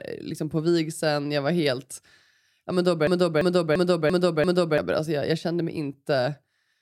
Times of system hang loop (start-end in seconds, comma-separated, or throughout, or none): 3.07-4.78